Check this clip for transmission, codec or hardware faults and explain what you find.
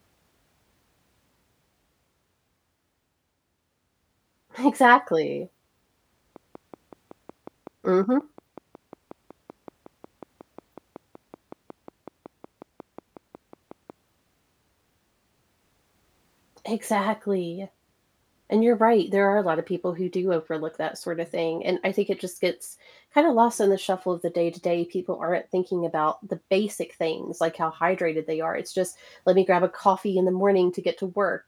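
One fault stands out, a train of clicks from 6.36 s to 13.91 s. Over those seven and a half seconds a steady ticking of around forty near-identical pops runs over and between the speech at a regular 5.44 per second, each about as loud as the speech itself. The evenly repeating, uniform pulses most likely come from interference from nearby equipment or a faulty connection or power supply injecting the same spike on a fixed cycle.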